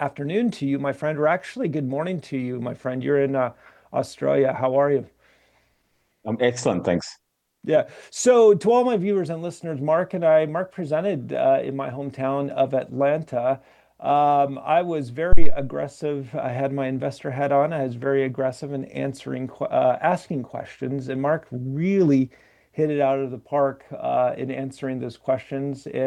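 At 15.33 s a phantom power thump hits. A supply on the live input was switched, and that sudden voltage step passed through the coupling capacitors into the signal path. The result is a deep, low thud rather than a click. It peaks at about -2 dBFS, close to full scale. Most of its energy falls away within about 57 ms. A tail lingers until roughly 15.58 s.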